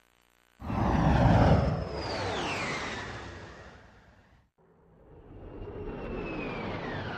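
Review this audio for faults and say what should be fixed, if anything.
Nothing stood out on listening, so there is nothing here that needs fixing.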